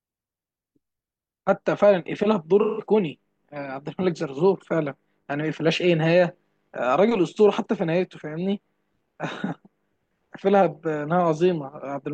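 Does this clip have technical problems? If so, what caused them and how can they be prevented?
Yes. AAC frame loss with concealment occurs at 2.61–2.86 s and 9.44–9.50 s. The decoder patched the missing spans, about 171 ms and 43 ms, from the last good spectrum, leaving smeared, noisy patches in the speech. Forward error correction or retransmission on the transport would prevent it.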